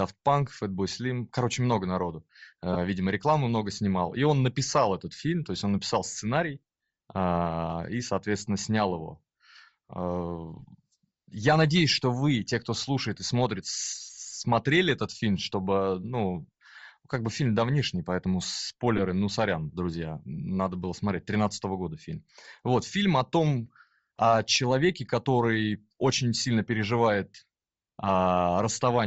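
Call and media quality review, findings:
Breathy, grainy edge on speech throughout, noise-filled upper band; likely Bluetooth LC3 compression at low bitrate, upper spectrum zeroed and noise-substituted, short 7.5 ms frames.

Lost LE Audio frames: brief noisy smears at 2.73–2.77 s (after "короче много народу"), 10.59–10.61 s, and 18.97–19.00 s (before "ну сорян друзья надо"). Each is about 15 ms, which fits two frames concealed with the repeated spectrum.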